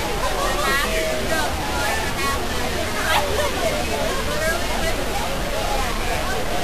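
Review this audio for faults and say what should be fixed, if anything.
A distortion runs through the whole recording, and the quiet gaps between sounds fill with a gritty noise floor instead of falling silent. Both point to a stuck bit, likely a broken data line or converter holding one bit at a fixed value. About half the samples land off by that bit's weight, and the stuck bit also changes with the sign of small values near zero, which creates the noise in the pauses. On a waveform, quiet stretches show a fuzzy band instead of a flat line. A spectrogram shows broadband smear through every gap. Checking the converter and cabling, and testing with a known signal before recording, would prevent it.

The clip also sounds hissy and grainy from start to finish, with roughened tonal content and softened transients. This is Vorbis compression at a low setting, with damage that fits a bitrate around 36 kbps. 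The codec keeps a smooth spectral envelope but quantises the treble so coarsely that fine detail turns into noise of similar energy. On a spectrogram, everything stops at a hard ceiling near 14.2 kHz, and the upper bands look blotchy and speckled. Sharp attacks appear smeared in the waveform. Encoding at a much higher quality or keeping a lossless master would prevent it.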